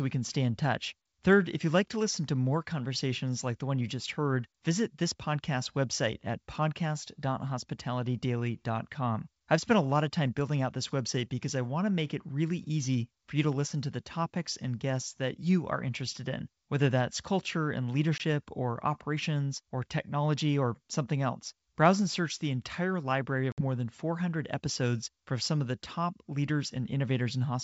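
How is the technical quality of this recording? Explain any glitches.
Two brief dropouts break the speech, both from packet loss on an ADPCM call carried over G.722 wideband coding. The first, at 18.18 s between "whether that's culture and" and "or operations or technology", removes about 20 ms, roughly one packet. The second, at 23.52 to 23.62 s after "search the entire library" and before "more than", removes about 60 ms, around three packets. The gaps are filled with silence, so the decoder's adaptive predictor and step size lose track of the sender's. Speech resumes slightly distorted before settling. On a waveform each shows as a flat, hard-edged gap. A spectrogram shows a blank vertical stripe.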